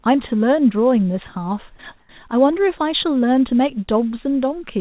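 From 2.00 to 2.09 s, the real background in this speech is swapped for a flat, featureless hiss about 6 dB quieter, likely comfort noise in place of the background: the sender went silent in a pause and the receiver filled those 90 ms with synthetic noise, all of it band-limited at 4 kHz by the call codec.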